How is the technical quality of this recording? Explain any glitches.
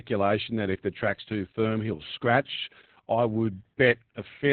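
Technical quality is poor: the speech is heavily compressed throughout its whole length.

Opus voice compression, present from start to finish: the sound points to Opus in its SILK speech mode at a very low bitrate, around 8 kbps. At that rate the coder keeps only a narrowband signal, discarding everything above roughly 4 kHz, and represents the excitation driving its linear-prediction model only coarsely. The result is muffled, telephone-like speech with a hoarse, slightly robotic texture and clear loss of consonant crispness.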